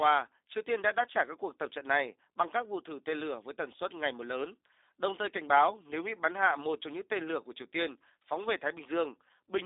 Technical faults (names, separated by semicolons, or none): G.729 codec